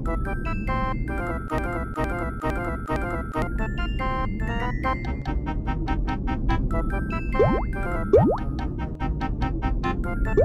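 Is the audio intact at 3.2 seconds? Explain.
No. From 1.58 to 3.42 s a broken-record loop repeats one 0.46 s fragment four times back to back, likely from a stalled player or stream resending its last buffer. The waveform and spectrogram show the identical block tiling across that span, and the intended audio is missing.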